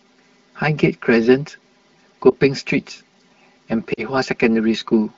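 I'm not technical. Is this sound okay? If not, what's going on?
No. Two things are wrong.

The whole clip sounds hollow and phasey, as if heard through a tube. This is channel delay (comb filtering): one of the two audio channels arrives about 5 milliseconds after the other, and when they are combined into one, parts of the sound cancel at a regular series of pitches. The first gap sits low, around 100 Hz.

There are also two brief glitches from lost AMR speech frames. These are pieces of the call that were damaged on the radio link, so the phone filled the gaps by stretching the previous sound and fading it down. At 2.29 to 2.33 seconds there is a short dip or wobble, consistent with one missing 20 ms piece. At 3.93 to 4.05 seconds a longer gap of about 40 ms, which sounds like two pieces lost, makes the voice drop to near silence before the speech recovers. The wideband phone-call coding itself is working as designed.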